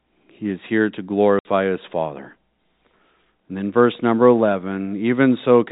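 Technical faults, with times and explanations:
1.39 to 1.45 s, packet loss filled with silence: Right after "is here to", the speech drops out for 60 ms. Several packets never arrived. The receiver put silence in their place instead of concealing the gap. The hole has hard edges, so the speech stops and restarts abruptly. Its length points to six lost packets of 10 ms each. The surrounding audio carries the narrow telephone band of G.711 coding.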